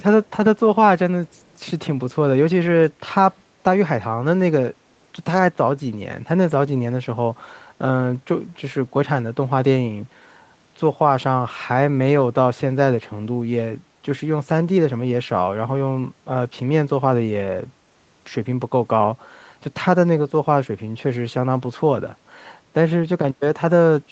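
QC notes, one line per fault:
0.25–0.32 s and 1.31–1.57 s, echo leak: a faint delayed copy of the speech trails the original by about 203 ms, sitting roughly 40 dB under it. Likely a loudspeaker on the far end whose echo canceller let some pickup slip back.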